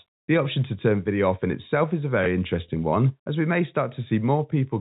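At 2.24 to 2.26 s, between "in itself is a" and "interesting one as we", a brief blip cuts in: packet loss with last packet repeated, one 20 ms packet replayed.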